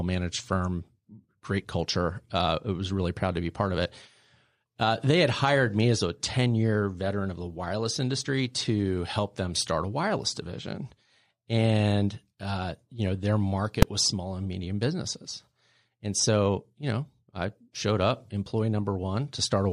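At 13.82 s, just after "uh you know their" and before "was small and medium", there is a single hard bang. This is invalid numbers at full scale. A calculation in the processing chain produced infinite or invalid values. These were clamped to the largest possible sample value. The output pinned at one extreme value for about 2.67 ms, which fits a 128-sample block. The block is so short that the onset and release merge into one loud click. The speech stops under it.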